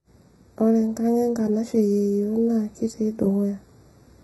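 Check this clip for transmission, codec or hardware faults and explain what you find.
Two faults run through the whole speech clip.

Channel delay (comb filtering), throughout: one channel lags by roughly 0.15 ms before the mono sum, cancelling evenly spaced frequencies from about 3 kHz upward, giving a hollow, phasey colour.

Heavy codec damage, throughout, likely from HE-AAC compression: the treble is rebuilt from copied lower bands, so sibilants turn gritty, metallic or lispy, nothing above 11.8 kHz, fitting roughly 16 kbps.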